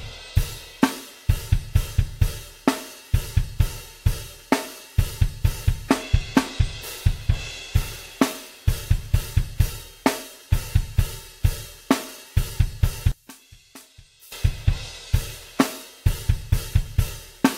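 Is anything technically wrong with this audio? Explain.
Yes. From 13.12 to 14.32 s the sound collapses by about 25 dB into a faint residue, likely from one channel inverted: opposite polarity cancels shared content in a mono sum. The waveform shrinks abruptly, and the spectrogram dims across all frequencies.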